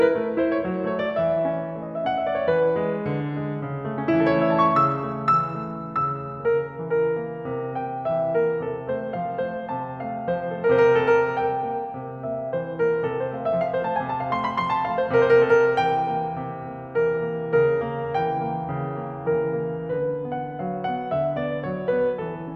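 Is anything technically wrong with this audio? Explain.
No, nothing technically wrong is audible in this music.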